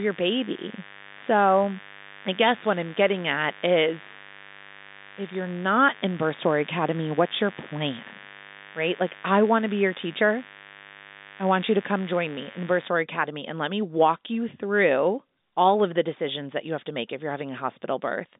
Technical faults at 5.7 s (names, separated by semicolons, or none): mains buzz